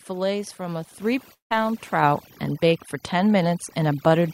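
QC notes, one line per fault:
Throughout, overdone noise removal: a noise reducer set far too aggressively on a noisy source pulls individual frequency bands down or out whenever they sit near its noise estimate, and the softer parts of the speech are taken along with them. The background drops away, dotted with twinkling, chirpy specks, while the speech loses its quieter detail band by band.
1.02 s, microphone volume stepped up: the call software judged the microphone input too low and raised the device gain in a single jump of 6 dB. Because the change happens at the input, speech and background noise both step up together, by about 6 dB, in one instant rather than ramping. The result is an abrupt lift in loudness, with nothing smoothing the transition.
1.33 to 1.52 s, long network dropout: audio stopped arriving for roughly 0.18 s, likely a network interruption. The receiver covered the gap by extending the last sound for about 0.17 s as a buzzy, hissy continuation that fades away, leaving near silence for about 0.14 s of it. 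Speech then resumes further along, with the missing stretch simply absent rather than delayed.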